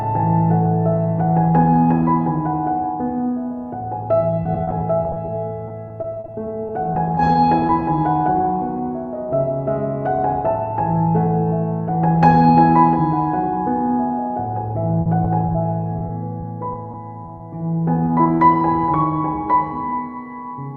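Two stretches of repeated packet loss give the sound that choppy, robotic edge, first from 4.43 to 7.71 s and again from 15.02 to 17.42 s. The holes come in quick succession, each no longer than 40 ms. The decoder patches each one by carrying on the last bit of sound, so you hear stuttering with small chunks gone. About 14% of the first stretch is filled-in audio, and about 9% of the second. Right after that come three short concealed packet losses, at 18.06, 18.24 and 18.38 s. Each one drops about 20 ms that never arrived in time. The receiver extends what came just before and then blends back into the real signal. You hear each as a brief smear or wobble, and any very short sound that fell in a hole can just disappear.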